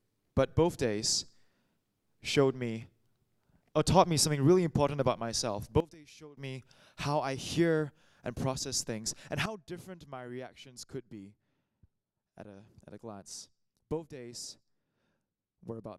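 At 5.80 s the level drops abruptly by about 17 dB. The sound and its background noise fall together in a single step. At 6.37 s both snap back up. At 9.46 s a second drop of about 12 dB arrives, again instant, and it lasts to the end. This is a sudden gain jump. The likely cause is a digital gain change applied from one sample to the next, with no ramp to smooth it.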